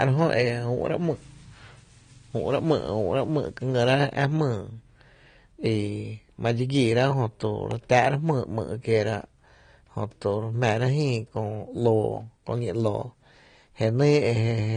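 From start to finish the speech carries AAC compression damage that is plainly audible. Nothing is present above about 9.7 kHz, and sibilants sound dull and smeared, with a fizzy, warbling texture where the encoder has thinned the upper bands. That combination is likely the work of AAC-LC at a low rate, which fits something around 32 kbps. A simple low-pass filter would remove the top end just as cleanly, but it would not add this swirling texture below the cut-off.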